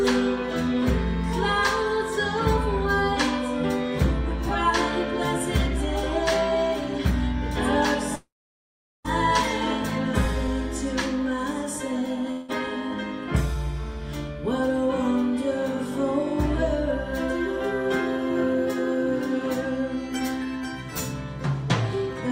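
At 8.15 s the sound smears into a fading buzz that drops to silence for about 0.78 s before resuming at 9.06 s, and at 12.31 s a shorter smear runs to 12.62 s without reaching silence. A long network dropout is the likely cause: the receiver stretched the last sound, then resumed with the gap skipped. Unlike a brief glitch, the first event decays into a lengthy silence.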